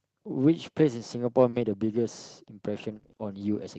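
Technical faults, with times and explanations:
1.49–1.55 s, short concealed packet loss: the sound briefly smears and wobbles for a few hundredths of a second. About 40 ms of the call arrived too late for the decoder. The receiver covered the hole by extending what it had just played, following its pitch or imitating it as shaped noise, then blended back into the real signal.
1.53–1.55 s, lost packet rebuilt from error correction: the end of that same blip sounds rougher and grainier rather than silent. This 20 ms frame, which fits one Opus packet, was missing, but the next packet carried a cheap low-bitrate copy of it through in-band forward error correction. The decoder played that copy, so no gap is heard, but the coarser coding adds noise. With the call already limited to 8 kHz, no further treble loss stands out.
2.91–3.25 s, repeated packet loss (robotic sound): this stretch turns choppy, stuttering instead of flowing. 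Packets dropped or arrived late five separate times, each gap no longer than 20 ms but adding up to about 100 ms, nearly a third of the span. Each hole was patched by continuing the last sound, and the next hole came soon after. Some of the missing audio was recovered from error-correction copies, which sound coarser.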